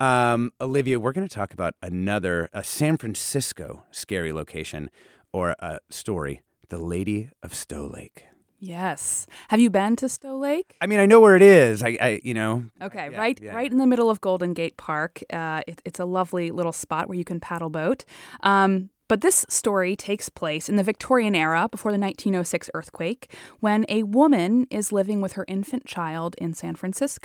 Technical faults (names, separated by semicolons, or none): none